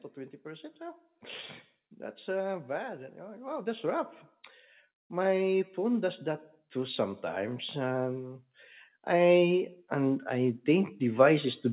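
Automatic gain rising affects this speech recording from 2.24 to 4.16 s (about 4 dB), 5.09 to 8.44 s (about 6 dB) and 9.05 s to the end. Each time, gain control judges the input too quiet and slowly lifts voice and background together. Above 4 kHz there is nothing, which fits a G.711 call path.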